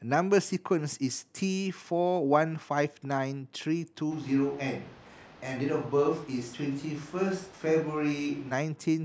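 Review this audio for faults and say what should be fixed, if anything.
From 4.13 to 8.51 s the speech goes suddenly roomy and hollow, loses its low end, drops about 5 dB, and room noise rises to roughly 25 dB below the speech. That's likely a switch to a distant microphone after the close mic dropped out. To prevent it, check the close mic's connection and batteries before each take.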